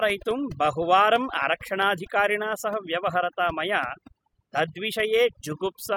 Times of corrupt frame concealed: none

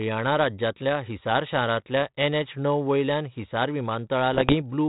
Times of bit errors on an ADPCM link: 4.32-4.55

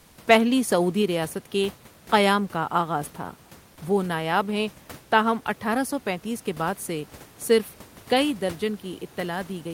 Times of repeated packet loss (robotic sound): none

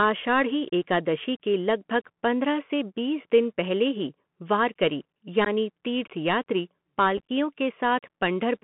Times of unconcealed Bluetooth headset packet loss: 5.45-5.48, 7.17-7.29

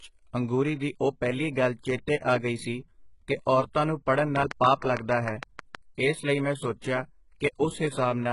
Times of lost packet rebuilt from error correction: none

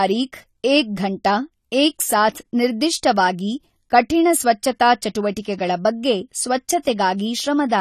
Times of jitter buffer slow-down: none

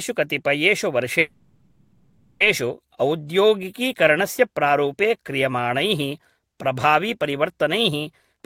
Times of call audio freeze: 1.19-2.42

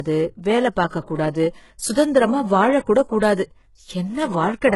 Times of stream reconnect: none

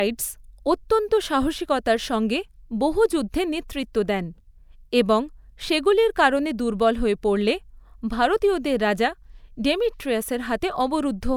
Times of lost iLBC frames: none

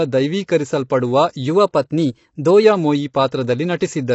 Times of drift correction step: 1.47-2.64

